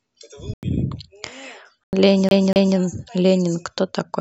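At 0.48 s the speech drops abruptly into silence until 0.63 s, and a second, shorter hole opens from 1.84 to 1.93 s. Both are corrupt frame muted faults: bit errors damaged compressed frames, the decoder rejected them, and the player filled the gap with silence. The first gap is long enough to suggest two lost frames, the second one. On a waveform these appear as flat near-silent blocks with hard vertical edges. On a spectrogram they are clean vertical bands of black.

From 2.29 to 2.77 s the audio stutters like a skipping disc, a CD stuck on one turn fault. A scratch kept throwing the laser back one track, so the same 241 ms slice plays twice, each jump marked by a brief mute. The result is a quick, evenly timed stammer. The waveform shows two identical envelope shapes side by side with tiny gaps between them. The spectrogram repeats the same pattern at a regular 241 ms spacing.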